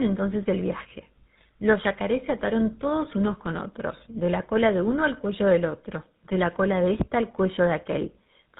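All the way through, the speech has that tandem speech coding sound: it sounds like two GSM full-rate passes in a row, so it's rough, muffled and warbly, with nothing above 3.8 kHz.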